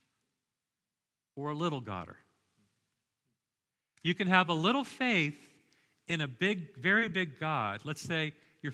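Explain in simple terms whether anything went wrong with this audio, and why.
Lost packet rebuilt from error correction, at 2.11 s after "or a little", at 5.01 s, and at 7.01 s: each time a 20 ms piece went missing, and a rougher backup copy carried in the next packet filled it.

Short concealed packet loss, from 6.99 to 7.03 s after "in a big": audio arrived too late, so the receiver briefly continued the previous sound, giving a quick smear.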